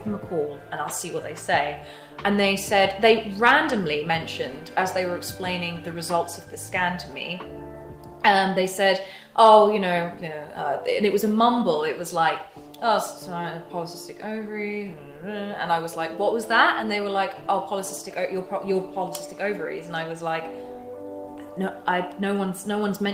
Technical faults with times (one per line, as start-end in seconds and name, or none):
none